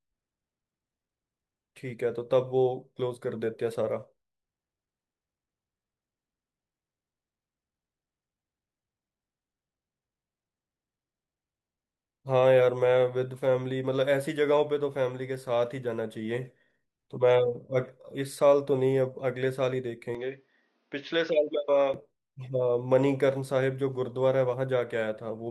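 From 20.15 s to 21.94 s the speech turns dull and boxy, with nothing above 6.6 kHz, drops a little in level and carries faint new background noise, all without any gap. This is likely the input switched to a poorer device.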